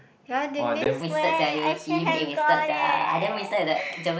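A speech recording carried over a Bluetooth mSBC headset link, with wideband sound up to 8 kHz and only light graininess from the codec. At 0.84 s there is unconcealed Bluetooth headset packet loss: a 15 ms hole with hard edges that sounds like two lost packets replaced by silence or an idle pattern. Unlike a dropout with concealment, nothing fills the gap, so it leaves an abrupt hole rather than smearing. From 1.01 s to the end, a section at the wrong speed plays 1.26 times fast, raising pitch by about four semitones. The likely cause is a playback or edit clock mismatch. Unlike a pitch shift alone, pace and pitch rise together.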